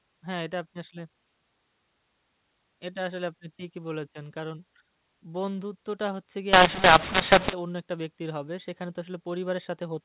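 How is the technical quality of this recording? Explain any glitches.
There's one clear glitch in this telephone-band speech, which is carried over G.711 A-law coding and stays below 4 kHz. From 6.53 to 7.53 s there's a mu-law and A-law mix-up. A-law samples get decoded as mu-law, which scrambles the levels, so the speech turns harsh and distorted and quiet moments fill with noise.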